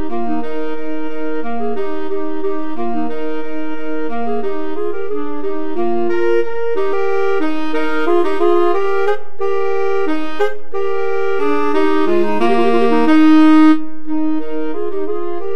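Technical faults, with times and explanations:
Throughout: DC offset. The entire waveform sits displaced from zero by a fixed amount, so the signal's centre line never returns to true silence. Nothing in the sound itself reveals this; it appears instead as a steady component at 0 Hz, consuming headroom on one side of the waveform. Unlike mains hum or low rumble, there is no audible tone or fluctuating bass: the energy is perfectly constant rather than periodic or moving.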